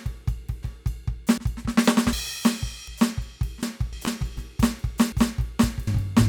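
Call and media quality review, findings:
Audio missing between chunks at 0.63, 1.38, 2.13, 2.88, 3.63, 4.37, 5.12 and 5.87 s: the music jumps forward abruptly every 0.75 s with no silence, roughly a third of a second lost each time. Likely a recorder handing over between 1.0 s chunks. Unlike dropouts, nothing goes quiet, and the regular spacing rules out network loss.

Doubled audio track from 3.93 s to end: a second full-band copy of the music at equal level, trailing by about one and a half seconds, starting abruptly. Likely a second, slower capture path mixed in. Unlike reverb or echo, there is no decay and no room colour.

Short concealed packet loss at 4.05 to 4.09 s: a brief smear where 20 ms never arrived and about 16 ms was filled by extending the preceding sound before blending back. The decoder's concealment causes it. It is isolated and irregular, unlike the periodic chunk skips, and smeared rather than cut.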